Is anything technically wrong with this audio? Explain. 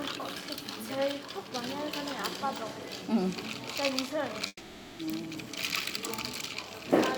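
Yes. A long network dropout runs from 4.47 to 5.02 s, most likely audio that never arrived. The last sound is stretched into a fading buzz or hiss for about half a second, then a brief silence, and the sound resumes with roughly half a second lost.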